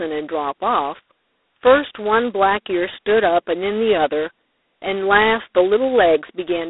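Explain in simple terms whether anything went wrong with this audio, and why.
The whole clip went through G.726 ADPCM telephone coding squeezed very hard, so the speech carries a rough, rasping hiss that swells with it, and everything above about 3.9 kHz is gone.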